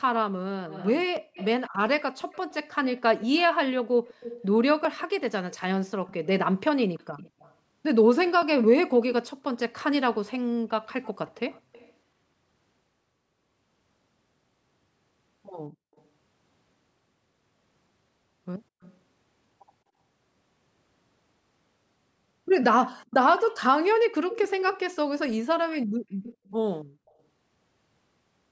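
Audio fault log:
0.69–6.14 s, 7.17–7.54 s, 10.89–11.93 s, 15.96–16.02 s, 18.82–18.97 s, 24.3–24.96 s and 26.23–27.14 s, echo leak: a faint second copy of the speech trails the original by 214 ms, from roughly 15 to 40 dB down. It's loudest at 24.3 s and barely there at 15.96 s. It's likely the far end is on a loudspeaker and its echo canceller isn't fully subtracting what the mic catches, so the leftover gets sent back to us.
23.92–24.16 s, background gated by the echo canceller: the room tone drops by as much as about 40 dB for roughly a fifth of a second, then comes back. That's the canceller clamping the mic hard while the loudspeaker is active, so the background vanishes briefly rather than fading naturally. It sits just before the loud echo leak at 24.3 s.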